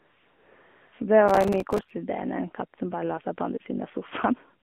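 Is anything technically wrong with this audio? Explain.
Yes, there are three faults. Throughout, the speech has been through the AMR narrowband mobile codec at 7.4 kbps, confined to roughly 200 Hz to 3.5 kHz, with plainly audible buzzy, synthetic coloration.

From 0.00 to 0.92 s, AMR comfort noise replaces the real background: no speech frames were sent, so the receiver generated a smooth, steady synthetic hiss.

From 1.28 to 1.91 s, processor overload crackle: dozens of missed audio deadlines each leave a tiny silent gap, consistent with buffers of a few milliseconds, heard together as gritty tearing.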